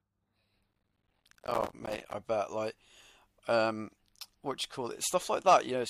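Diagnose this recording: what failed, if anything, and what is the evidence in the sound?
Processor overload crackle runs from 0.72 to 2.14 s, a failure at the driver and buffer stage. For about 1.4 s the speech carries a dense, gritty tearing that stops abruptly once the load clears. The texture points to buffers of around 5 ms being missed in quick succession, on the order of 150 of them, with each missed buffer filled with silence. Every dropout has hard edges, and the rapid string of clicks merges into continuous crackle.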